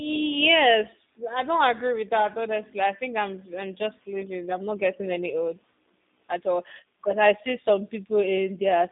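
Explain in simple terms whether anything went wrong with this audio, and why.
The speech sounds thin, slightly rough and robotic from start to finish. That's the G.729 phone codec, which rebuilds the voice from a simplified model and drops everything above 3.7 kHz.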